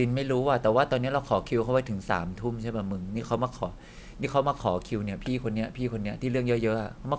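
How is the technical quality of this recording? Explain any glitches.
The recording has one persistent fault. Aliasing runs throughout: content above 8 kHz, consistent with a drop to a 16 kHz rate without filtering, folds back as gritty, metallic sibilance roughly 35 dB down, unlike clean dull band-limiting.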